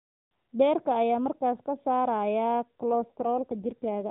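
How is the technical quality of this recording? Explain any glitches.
The recording is narrowband mobile-call speech with nothing above 4 kHz, and it has one glitch near the end.

An AMR rate drop runs from 2.91 s to 4.10 s. The network has evidently pushed the AMR-NB codec to a lower mode, spending bits on error protection, which fits a step from 12.2 to 5.9 kbps. The band stays the same and nothing cuts out, but the voice turns rougher, buzzier and more synthetic.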